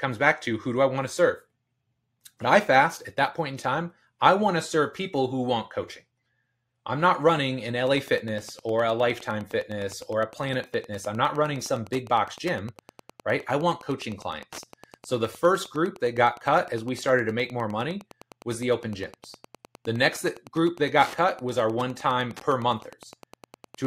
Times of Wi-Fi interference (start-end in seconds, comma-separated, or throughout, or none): 7.85-23.87